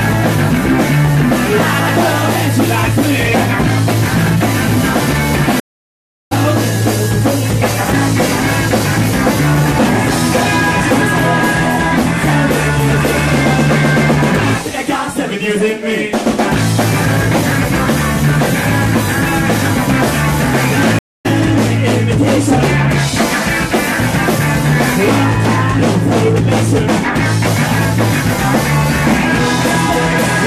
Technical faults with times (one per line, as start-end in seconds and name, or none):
5.60-6.33 stream reconnect
20.99-21.27 stream reconnect